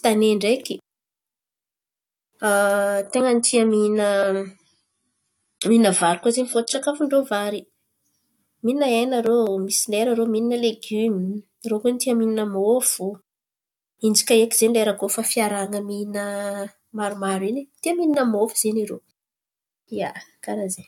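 A speech recording where, from 3.03 to 7.03 s, the adaptive stream drops to a lower bitrate: the top end suddenly vanishes above about 11.5 kHz and codec smearing appears, with no gap either side. It sounds like AAC falling from roughly 96 to 32 kbit/s.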